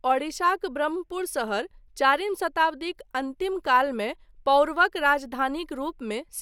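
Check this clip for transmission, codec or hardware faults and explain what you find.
No faults are audible anywhere in the speech, so there is nothing to flag.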